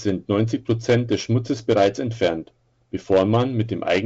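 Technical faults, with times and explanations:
The speech shows no technical faults; it comes through G.722 wideband telephone coding with nothing above 7.8 kHz and only the light coding texture that fits a 56 kbit/s mode.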